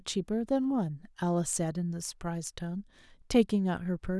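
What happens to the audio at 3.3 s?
Nothing goes wrong at 3.3 s; the speech carries on intact through that moment, with no dropout, click or other fault.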